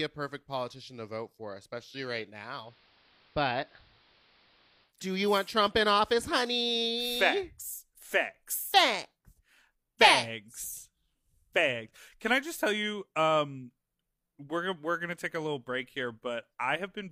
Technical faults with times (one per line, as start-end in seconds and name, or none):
2.56-4.94 digital radio blending to analogue